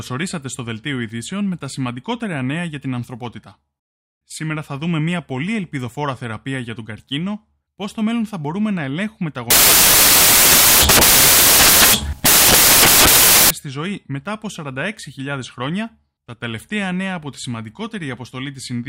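At 9.50 s, right after "μπορούμε να ελέγχουμε τα", the speech drops into four seconds of samples built from the wrong bytes, running to 13.50 s and clearing just before "στη ζωή μετά από". The reader has paired each sample's bytes wrongly, so the jittery low-order bits land in the loud high-order slot. You get a blast of harsh noise, close to white on the louder speech.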